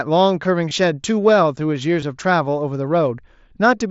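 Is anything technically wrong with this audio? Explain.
Yes. This speech clip has concealed Bluetooth headset packet loss at 0.69 s and 2.01 s, each gap about 15 ms long, which fits two lost frames. The receiver filled each hole by repeating the best-matching recent stretch of waveform, so instead of a silent dropout or a sharp click, there is a brief buzzy, held-over tone at full level with a slight warble as real audio resumes. The wideband mSBC link itself caps speech at 8 kHz with light graininess.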